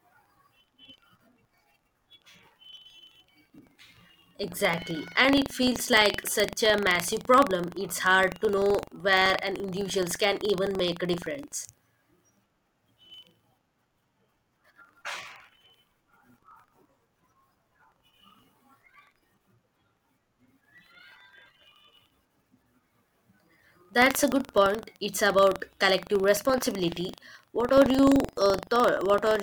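Speech with buffer tearing throughout: a steady 23.4 Hz robotic rattle, fitting a 2048-sample buffer, where a sliver of audio about 100 ms old intrudes. It is present only while sound plays, unlike hum.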